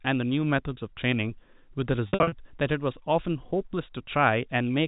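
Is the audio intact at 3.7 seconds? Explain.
Yes, the speech at 3.7 seconds is intact, with nothing disturbing it beyond the narrow, band-limited character of G.711 telephone coding, which is working as designed.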